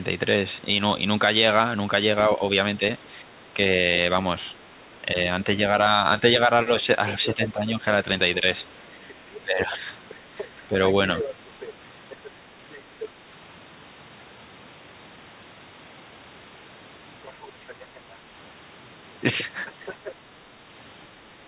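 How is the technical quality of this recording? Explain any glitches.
The recording has two recurring call-processing faults. The speech is narrowband, with nothing above 4 kHz, which fits a G.711 call path.

Speech suppressed in double talk occurs at 2.37–3.58 s, 4.98–5.16 s, 6.2–7.85 s and 9.44–10.74 s. The talker's level dips in short patches, by about 5 dB and by about 10 dB at 6.2–7.85 s. The likely cause is the echo canceller attenuating everything while both sides talk.

The other side's voice leaks through from 6.8 to 13.08 s at about 10 dB below the speech, at 17.24–18.0 s at about 25 dB below, and at 19.66–20.12 s at about 15 dB below. A second voice is audible underneath, likely loudspeaker echo the canceller failed to remove.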